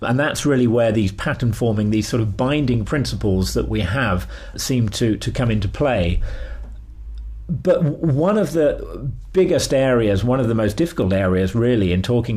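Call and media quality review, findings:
No audible defects found; nothing to escalate.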